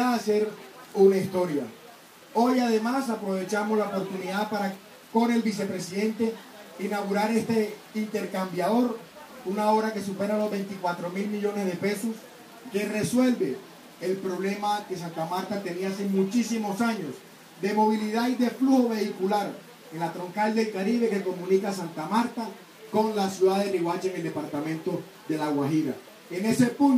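No technical faults can be heard anywhere in the recording.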